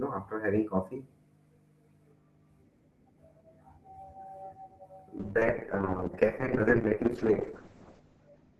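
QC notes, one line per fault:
5.18 s to the end, call bitrate drop: the speech turns rough and watery, and its top end is cut off at about 8 kHz. The call's bandwidth estimate collapsed, so the encoder had far fewer bits and coded the spectrum more coarsely. The sound suggests a fall from roughly 32 kbps to about 7 kbps. At that rate Opus also narrows its band, discarding everything above 8 kHz. The worst stretch lasts about 2.8 s, and the clip ends before it recovers.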